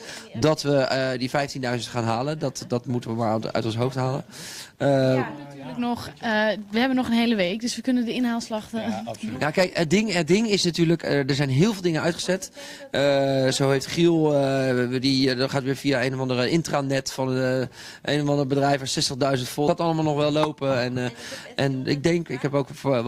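The audio jumps abruptly ahead with a brief blip at 19.67–19.71 s, a stream segment skipped, likely because one segment failed to load and playback continued from the next.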